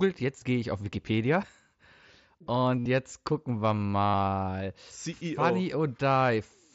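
Concealed Bluetooth headset packet loss hits this speech clip at 2.79–2.86 s, just before "jetzt gucken wir", and at 4.06–4.14 s, right after "jetzt gucken wir". Each gap lasts about 70 ms and is filled by repeating recent waveform, giving a held buzzy tone that warbles as real audio resumes, all over the wideband mSBC headset codec.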